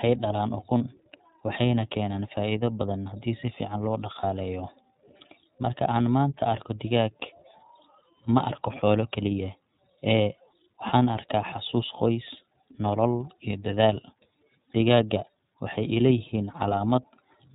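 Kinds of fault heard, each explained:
iLBC codec: the speech is squeezed into narrowband at about 13.3 kbps in 30 ms frames, so everything above 4 kHz is gone and it sounds noticeably rough and synthetic.
Lost iLBC frames: two single 30 ms frames drop out, near 0.78 s and at 4.2 s just after "fiican loo", each patched with a brief buzzy held vowel before recovering straight away.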